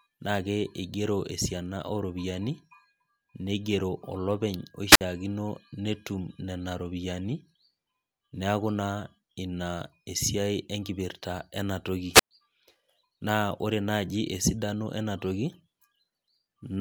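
Wireless microphone squelch dropout occurs twice. The radio link fades and the receiver's squelch mutes the output, causing a burst of hiss, then a 56 ms silent gap at 4.91 to 5.01 s and a 116 ms gap at 12.13 to 12.31 s.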